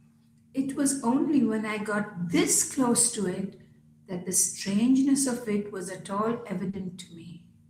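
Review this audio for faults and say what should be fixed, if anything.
There's one short concealed packet loss at 6.69 to 6.75 s. About 40 ms of the call arrived too late, so the receiver papered over it by extending the preceding sound and then crossfading back, leaving a quick smear in the speech. A deeper jitter buffer or some forward error correction on the link would help avoid it.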